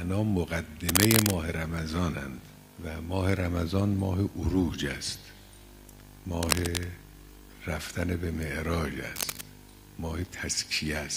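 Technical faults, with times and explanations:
0.89–1.36 s, 6.43–6.85 s and 9.15–9.42 s, cable scratch noise: three short stretches of dense, irregular crackle and rustle sit over the sound. The first is a little louder than the sound itself, the second about level with it, and the third a little weaker. The ragged bursts likely come from a worn cable, connector or control being moved, so its contact resistance jumps about and briefly injects noise into the signal.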